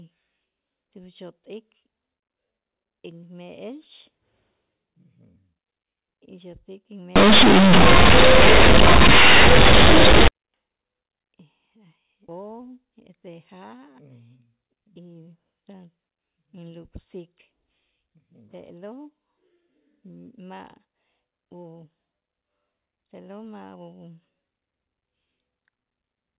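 From 7.16 to 10.28 s the speech becomes a harsh, very loud buzz. This is companded audio read as linear. The mu-law bytes play as plain 8-bit samples, unexpanded. Each sign change swings half the range, so quiet parts blare and pauses roar.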